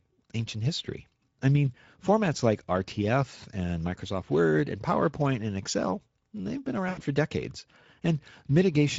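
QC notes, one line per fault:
throughout: Speex codec. Plainly audible hoarse, noisy coarseness from a starved CELP excitation, consistent with a rate near 16.8 kbps. It is steady across the clip, unlike a momentary dropout.
6.89–7.00 s: VoIP packet loss concealed by the speech codec. About 80 ms of missing audio, which fits four lost 20 ms frames, is bridged by a fading extrapolation of the last pitch rather than silence or a click.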